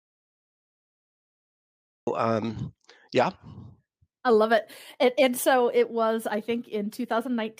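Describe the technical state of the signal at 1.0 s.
Audio dropout to silence, running from the very start of the clip to 2.07 s, so 1.0 s falls inside it. The input was most likely lost upstream while silence kept being written, leaving silence with no room tone until the speech resumes at "um yeah".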